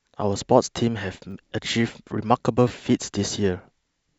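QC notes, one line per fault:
1.31–1.33 s and 2.68–2.70 s, repeated buffer: a 10 ms chunk plays three times back to back, hard joins and all, so you get a quick buzzy click, with nothing skipped afterwards.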